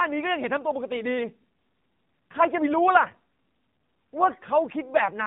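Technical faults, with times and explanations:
Throughout: AMR narrowband mobile codec. Nothing above 4 kHz survives, so the speech sounds boxed and phone-like. The codec rebuilds the voice from a vocal-tract model and a few excitation pulses per frame, and the plainly buzzy, synthetic texture fits a low mode of about 7.4 kbps.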